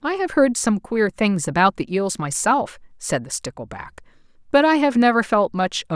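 No audible technical faults anywhere in the recording; nothing to flag.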